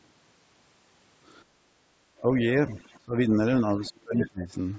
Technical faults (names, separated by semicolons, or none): background gated by the echo canceller; speech suppressed in double talk; other side's voice leaking through